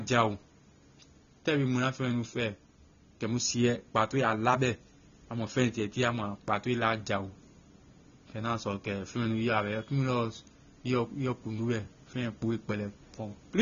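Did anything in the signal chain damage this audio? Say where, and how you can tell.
Yes. AAC compression runs throughout the speech. Nothing reaches above 6.9 kHz, and sibilants and sustained vowels carry a smeared, warbling texture. That points to the codec stage, likely low-bitrate AAC-LC near 24 kbps, which lowered its cut-off and quantised each frame's spectrum too coarsely.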